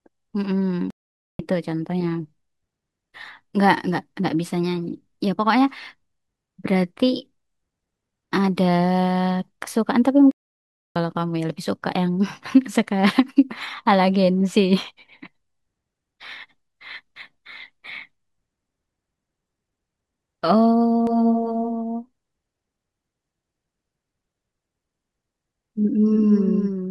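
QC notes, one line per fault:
0.90–1.39 s and 10.31–10.96 s, playback stall: the speech cuts out mid-flow into dead silence for 0.49 s and then 0.64 s before resuming. This is likely the player running out of buffered data or its thread being blocked until output recovered.
21.07 s to end, doubled audio track: a second full-band copy of the speech appears abruptly, trailing by roughly 300 ms at about 5 dB below the original, with no decay or room colour. It likely comes from the same audio mixed in twice through a slower path.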